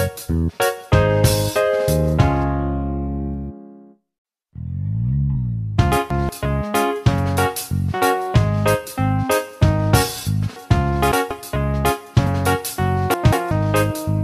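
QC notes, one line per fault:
2.18, 5.35 and 12.26 s: compressed frames skipped. A single frame drops out each time, a tiny slice at 2.18 s and about 20 ms at the other two.
5.92–6.29, 10.56–11.31 and 13.14–13.51 s: chunks out of order. Blocks of about 186 ms play late and out of sequence, giving a jumbled moment with hard joins. The middle one sounds like a chunk landing about three places late, the other two only one place late.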